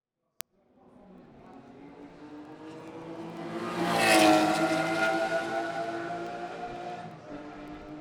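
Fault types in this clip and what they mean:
Word clock ticks: the receiving device runs on its own clock, off by roughly 300 ppm, so every few hundredths of a second one sample is dropped or repeated, giving about a hundred sharp, uneven ticks from 0.12 to 7.96 s, seen as thin vertical spectrogram lines and waveform spikes.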